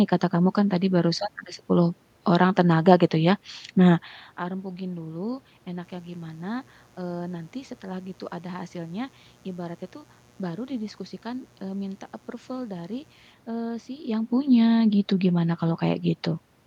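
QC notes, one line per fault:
5.80–13.35 s, mains buzz: a steady, raspy buzz sits roughly 25 dB under the speech, then stops. A dimmer, rectifier or unshielded path is letting sharp switching spikes in twice per 60 Hz cycle, spreading harmonics up into the kilohertz range.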